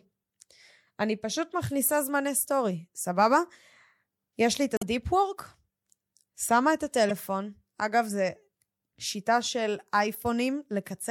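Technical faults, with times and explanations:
4.74–4.83 s and 7.09–7.11 s, damaged data in a compressed stream: two short glitches break into the speech, the first lasting about 80 ms and the second a brief blip of about 20 ms. Some bytes in the compressed stream at these points are corrupt, so the decoder cannot read those frames. It loses its place and scans for the next valid frame header before it locks on again.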